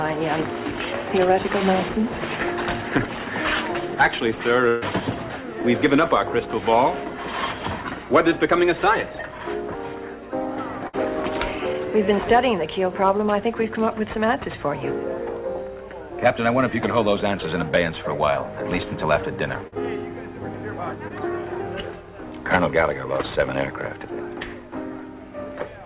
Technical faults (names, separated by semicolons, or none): burst of packet loss; short concealed packet loss